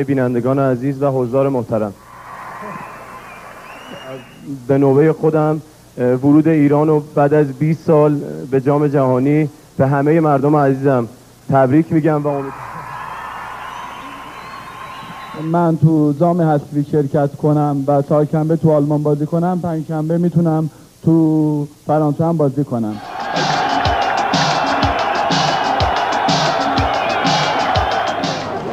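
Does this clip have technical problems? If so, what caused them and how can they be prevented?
No, there are no technical problems to report here.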